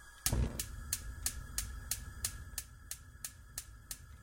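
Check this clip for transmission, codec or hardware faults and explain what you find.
No transmission, codec or hardware faults can be heard anywhere in this recording of sounds. There is nothing here that calls for a fix.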